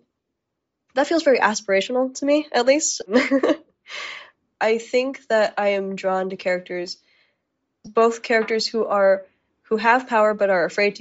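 Speech throughout carries Bluetooth LC3 compression damage that is plainly audible: the upper spectrum sounds thinned and partly replaced by noise, giving the voice a breathy, grainy edge. This is likely the LE Audio codec running at a low rate, consistent with roughly 32 kbps in 10 ms frames. Two brief lost LE Audio frames occur, at 3.01 s and from 7.86 to 7.88 s. Each is a short dropout where the decoder repeated the previous spectrum with scrambled phase, which fits one missing 10 ms frame apiece.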